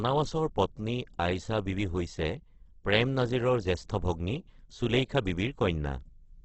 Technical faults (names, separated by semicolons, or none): Opus compression